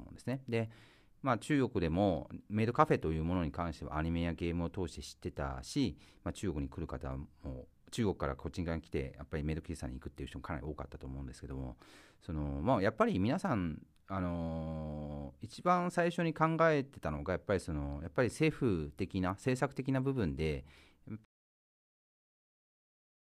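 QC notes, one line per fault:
21.25–23.27 s, audio dropout to silence: the input feeding the recorder was most likely lost here, through a disconnected device, a failed link or an accidental mute, while recording carried on writing silence. The speech cuts off abruptly in mid-flow and the final 2.02 s are total silence, with no room tone left. Nothing from that stretch survives, and the sound never returns before the clip ends.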